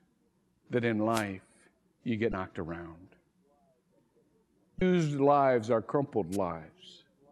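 A speech recording carries two kinds of fault. Short swishes of static rise over the voice from 1.11 to 1.24 s and again, more briefly, from 6.32 to 6.37 s. These are wireless microphone noise hits: the analogue FM radio link fades as reflected signals cancel the direct one, and the receiver's own noise surges up through the audio until the signal recovers. The longer hit lasts about 130 ms. Separately, two quick blips cut in at 2.30 to 2.33 s and 4.78 to 4.82 s, each lasting only about 30 ms. These come from damaged data in a compressed stream. Corrupted bytes make the decoder misread those frames and lose sync, so it produces a brief glitch before finding the next valid frame header and resuming.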